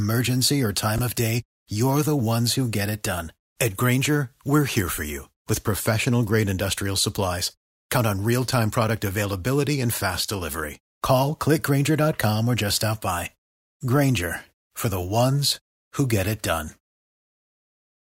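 At 0.96 to 0.99 s the speech has a brief jumbled moment, a tiny stretch where the sound seems garbled. These are chunks out of order. One 10 ms chunk of audio arrived or was written two chunks late, so it plays after the two chunks that should have followed it. No audio is missing, but the sequence is scrambled across those 30 ms, and the rearrangement leaves three hard joins where the waveform doesn't continue smoothly.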